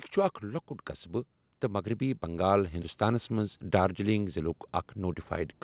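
From 1.6 to 3.62 s the speech and background swell together by about 6 dB: automatic gain rising, as gain control lifts a too-quiet input, over narrowband audio topping out at 4 kHz.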